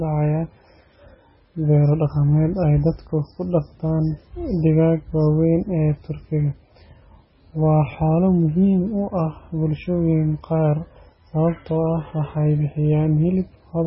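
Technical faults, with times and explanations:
Throughout, MP3 compression: nothing above 5.6 kHz, so the speech is dull and muffled, with heavy watery, swirly artefacts as weak frequency lines drop in and out between frames. This is likely a very low-bitrate MP3 encode, consistent with around 16 kbps.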